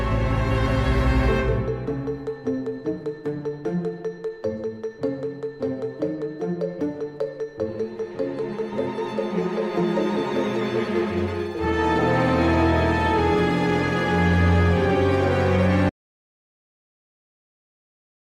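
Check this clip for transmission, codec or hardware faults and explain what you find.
One fault is present. At 15.9 s the sound cuts out mid-flow and never returns. This is an audio dropout to silence. The input was likely lost, and silence was written. The gap holds no room tone. It is silence to the end.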